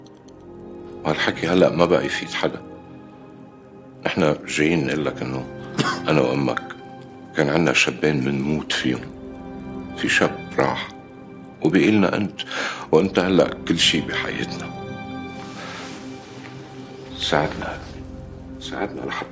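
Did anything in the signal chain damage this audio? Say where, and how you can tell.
Yes. At the sample-rate conversion stage, from 48 kHz down to 16 kHz, the resampler restarted on every block, filtering each 50 ms block without its neighbours. Each block edge gets a small error, heard throughout as a steady 20 Hz ticking buzz that follows the signal.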